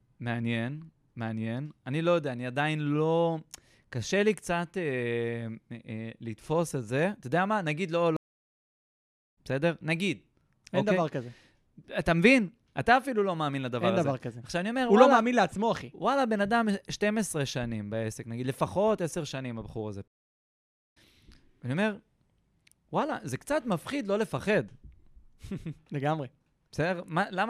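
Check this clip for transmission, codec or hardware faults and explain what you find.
Two stream reconnects interrupt the speech, from 8.17 to 9.38 s and from 20.08 to 20.97 s. Each time the connection dropped, the player fell silent, reconnected and started a new decoder partway through the stream. The gaps last 1.15 s and 0.83 s. The speech then picks up at a later point, skipping about a second after the first gap and about half a second after the second, with a brief muted or faded start as the decoder begins again.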